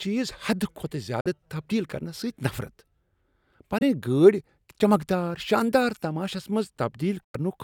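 This speech clip has three brief silent gaps, at 1.20 to 1.27 s, 3.78 to 3.83 s and 7.24 to 7.36 s. They are about 46, 23 and 93 ms long. The sound stops abruptly and resumes further on. This is likely a Bluetooth dropout, with late packets discarded.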